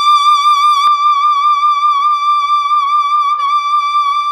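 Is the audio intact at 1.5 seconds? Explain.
No. From 0.87 s to the end the music sounds dull and muffled: wrongly applied de-emphasis cuts treble, smoothly reaching about 13 dB down at 10 kHz.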